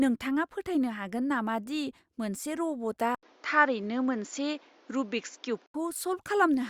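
At 3.15 s the speech drops out for about 80 ms, then returns duller and boxier, with nothing above 7.2 kHz and a faint new noise floor roughly 35 dB below the signal. Loudness stays about the same, so the change is heard mainly as lost air and a different tone. The likely cause is an input switched to a poorer device mid-recording, passing a narrower band. Full bandwidth returns at 5.74 s.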